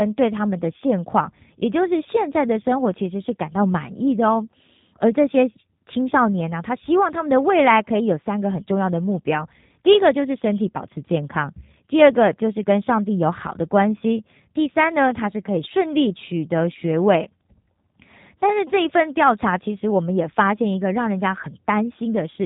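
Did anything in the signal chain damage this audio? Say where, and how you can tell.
Yes, at the codec stage: the whole clip has been through a G.729 speech codec, and the damage is plainly audible from start to finish. The encoder discards the waveform and sends only a vocal tract filter, a pitch predictor and a few pulses for each 5 ms half-frame, so the speech comes back bandlimited to 4 kHz, with a rough, synthetic buzz in the voice. That points to an 8 kbit/s G.729A encode.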